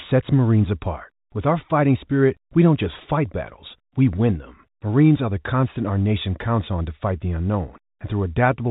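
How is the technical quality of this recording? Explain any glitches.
No glitches can be heard anywhere in this recording.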